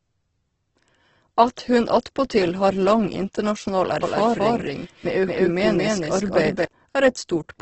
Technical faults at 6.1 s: Opus compression; doubled audio track

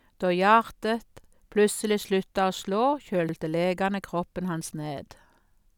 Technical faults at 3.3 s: overlapping chunks

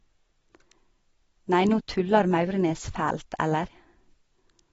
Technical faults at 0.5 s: AAC compression

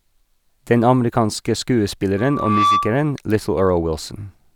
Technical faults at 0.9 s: none

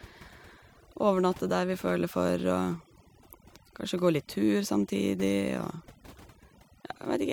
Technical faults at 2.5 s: overdone noise removal

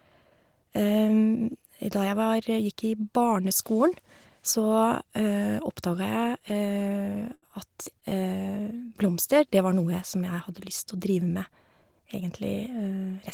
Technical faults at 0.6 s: none

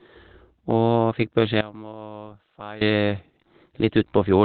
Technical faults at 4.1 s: Opus compression

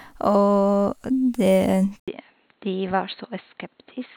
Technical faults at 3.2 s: input switched to a poorer device

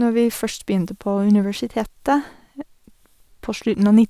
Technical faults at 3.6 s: none

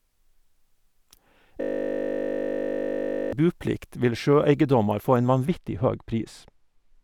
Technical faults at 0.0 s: none

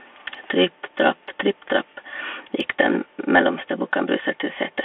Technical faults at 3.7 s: Bluetooth CVSD headset codec

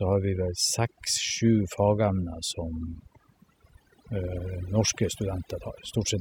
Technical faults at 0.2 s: overdone noise removal

